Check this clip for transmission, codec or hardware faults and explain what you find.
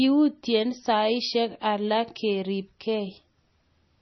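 One codec fault is present across the whole speech clip. Throughout, the sound is dull and watery, with nothing above about 5.9 kHz. This is likely MP3 compression at a starved bitrate, around 24 kbps, cutting treble and switching weak frequency lines on and off.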